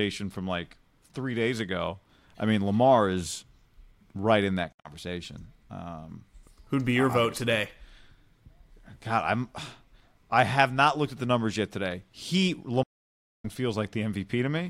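Bluetooth dropouts at 4.72–4.91 s, just after "right in that," and at 12.83–13.45 s: the speech cuts out and resumes further along, likely from packets lost over the wireless link.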